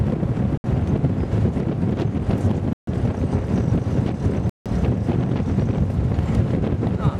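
The audio drops to silence three times. The first gap runs from 0.58 to 0.64 s, lasting 66 ms. The second runs from 2.73 to 2.87 s, lasting 142 ms. The third runs from 4.50 to 4.66 s, lasting 163 ms. Each is a hard cut to nothing, then sound returns. These are likely Bluetooth stalls. Radio interference delays packets, the headphone buffer empties, and playback halts until resent data arrives. The gaps lengthen as the clip goes on.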